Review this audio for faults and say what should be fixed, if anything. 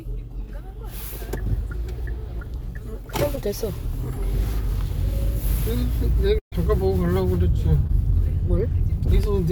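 Short concealed packet loss occurs at 3.35 to 3.39 s and at 7.87 to 7.91 s. About 20 ms of audio failed to arrive each time, and the receiver extended the preceding sound for 12 ms and 16 ms, which is heard as a brief smear or wobble. On a spectrogram this appears as a thin vertical band of copied or blurred texture, and the waveform shows a short, too-regular stretch before the real signal resumes. A larger jitter buffer or forward error correction would prevent these gaps.

A burst of packet loss runs from 6.39 to 6.54 s. About 140 ms went missing. Concealment continued the last sound for 130 ms while fading it, leaving about 110 ms effectively silent before the audio resumes further on. The waveform shows a tapering envelope dropping to near-flat, and the spectrogram shows smeared, repeated texture fading into an empty gap. Redundant packet coding such as FEC or RED, or a more stable network path, would prevent this.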